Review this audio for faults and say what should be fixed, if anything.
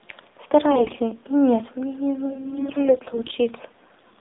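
The AMR narrowband mobile codec runs throughout. The speech is squeezed into a 250 Hz to 3.7 kHz band and sounds buzzy and synthetic, which fits a low mode around 7.4 kbps. A spectrogram shows a hard ceiling near 3.7 kHz. To prevent it, carry the call over a wideband codec or at a higher AMR rate.

AMR bit errors hit at 0.72–0.97 s and again at 2.32–3.33 s. Flipped bits misplace the excitation pulses, so the voice keeps its pitch but turns hoarse and gargly, most harshly in the first, heavier burst. On a spectrogram, the harmonics smear into scratchy noise in those spans. To prevent it, strengthen the radio link or its error protection so damaged frames are not decoded as if they were valid.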